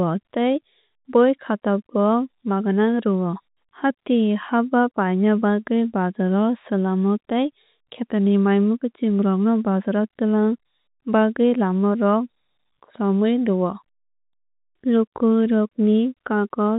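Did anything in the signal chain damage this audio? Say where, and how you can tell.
No, nothing in the chain damaged this speech. The G.711 telephone coding is audible as a band that stops at 4 kHz, with a faint quantisation hiss that rises and falls with the level of the speech.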